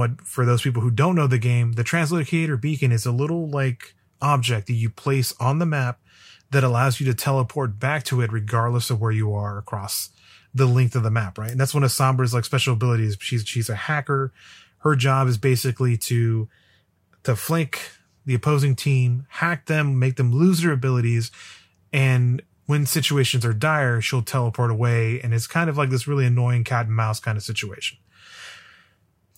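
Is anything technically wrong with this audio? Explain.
No, nothing technically wrong can be heard here.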